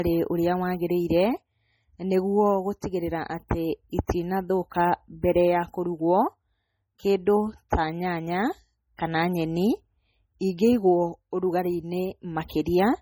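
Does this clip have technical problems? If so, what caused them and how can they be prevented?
Yes. Throughout the speech, the sound carries the smeared, swirly coarseness of heavy MP3 compression, though the file itself is at a high bitrate. This is likely low-bitrate audio saved at a high bitrate, which fits a 32 kbit/s MP3 source re-encoded at 320 kbit/s. The second encoding cannot restore detail the first discarded. On a spectrogram, content reaches about 20.1 kHz but looks patchy and blocky. To prevent it, always encode from the original uncompressed recording.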